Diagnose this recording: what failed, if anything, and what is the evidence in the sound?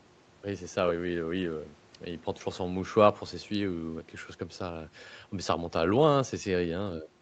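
Nothing failed in this speech recording; no stage shows a fault. The sound stops at about 8 kHz, as expected from a call microphone chain and a call codec set to that bandwidth, and that band limit is normal behaviour of the path.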